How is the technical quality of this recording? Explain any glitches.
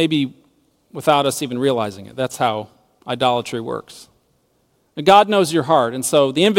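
No glitches or technical faults are audible anywhere in the speech recording.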